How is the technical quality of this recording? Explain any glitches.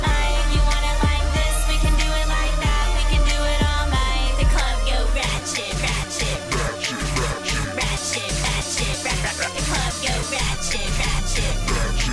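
Nothing in this recording glitches or breaks up, so there's no problem to explain here.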